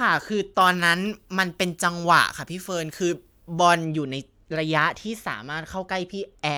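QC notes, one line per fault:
0.61–3.85 s, pre-emphasis left on: the speech turns thin, bright and hissy, with treble about 14 dB above 1 kHz by 10 kHz, following the 75 µs FM curve. That steady rise from about 2.1 kHz, not a flat shelf, sets it apart from ordinary treble EQ.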